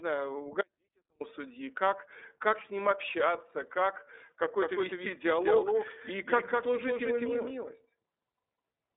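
The whole speech clip carries iLBC codec sound. The band stops near 3.8 kHz, so sibilants and breath lose their top. The speech stays clear but comes across slightly rough and synthetic. Each short frame is coded on its own, without help from the one before. The grain suggests 30 ms frames, which fits the 13.33 kbps mode of iLBC. The damage is plainly audible, not subtle.

From 0.62 to 1.20 s there is an audio dropout to a faint residue. The speech cuts out abruptly for about 590 ms. It does not fade or pause naturally. Only a faint trace remains in the gap, roughly 40 dB below the normal level. The path after the break seems to have stayed live. The likely cause is the wanted signal being lost upstream while the rest of the chain kept running.

At 4.59 s a doubled audio track begins and runs to the end. A second copy of the speech enters abruptly, trailing the original by about 200 ms. 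It sits a few dB below the main signal. The copy has no decay and no room colour. That rules out a natural echo. The likely cause is the same audio being mixed in twice, once through a slower path.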